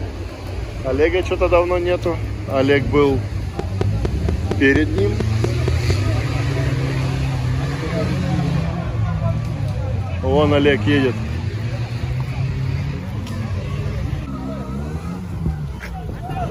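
A train of clicks runs from 3.59 s to 5.91 s: about ten sharp, near-identical pulses arriving at a regular 4.33 per second and standing roughly 15 dB above the surrounding sound, so they read as a steady ticking laid over the audio rather than part of it. Uniform shape and even spacing like this point to a repeating external pulse, likely interference from nearby equipment or a faulty connection or power supply.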